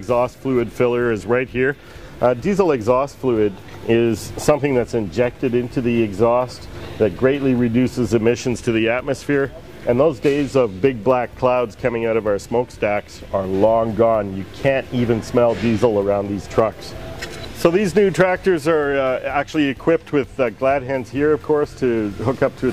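No faults can be heard anywhere in this recording.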